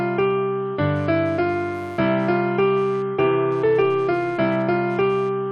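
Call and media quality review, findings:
Computer activity noise throughout. Buzzing chirp pulsing near 150 Hz, roughly 30 dB under the signal, following machine load, not the sound. Probable component: shared ground between computer and audio interface. CPU, GPU or mouse current swings modulating the ground reference.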